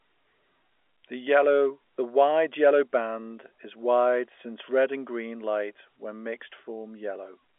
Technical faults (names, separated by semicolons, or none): none